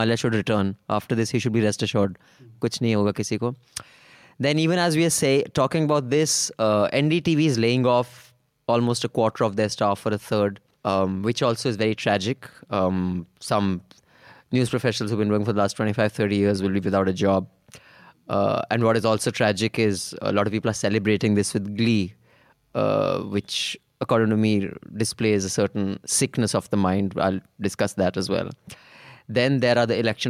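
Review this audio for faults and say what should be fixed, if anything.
Nothing stood out on listening to the speech, so there is nothing here that needs fixing.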